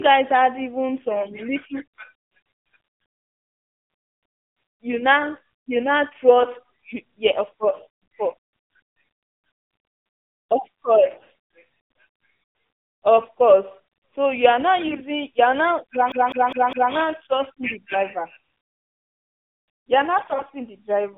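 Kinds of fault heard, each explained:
AMR narrowband mobile codec: The speech passed through a 2G/3G mobile coder that rebuilds the voice from a vocal-tract model at a low bitrate, consistent with about 7.4 kbps. With the line band limited to 150 Hz to 3.6 kHz, the voice sounds thin, buzzy and plainly synthetic throughout.
AMR bit errors: Flipped bits in the weakly protected parts of the coded frames misplace the excitation pulses and skew the finer pitch, gain and spectral values. Six short bursts, each under 0.35 s, turn the voice hoarse, scratchy and gargly, the first right after "guys had even" near 1.14 s.
CD stuck on one turn: A disc fault kept throwing playback back to the same spot, so a segment of about 0.2 s replays four times with a brief mute at every jump. The result is a rapid, even stutter from 16.12 to 16.93 s, just after "are now you are".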